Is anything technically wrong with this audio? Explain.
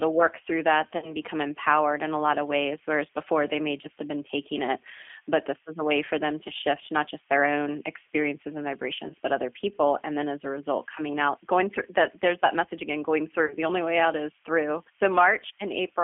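Yes. Throughout, the speech sounds rough, slightly synthetic and boxed into a narrow telephone band of roughly 300 Hz to 3.4 kHz. That is the G.729 codec at 8 kbit/s, which rebuilds the voice from a vocal tract filter, a pitch predictor and sparse pulses.

At 0.98–1.13 s, 9.08–9.15 s and 13.46–13.57 s, the sound smears into a fading buzzy tone or coloured noise before recovering. This is VoIP packet loss concealed by the speech codec: the decoder extrapolates the last frame across gaps of about 40, 20 and 40 ms, which fits two, one and two lost 20 ms packets. The voice stays weak or distorted briefly afterwards.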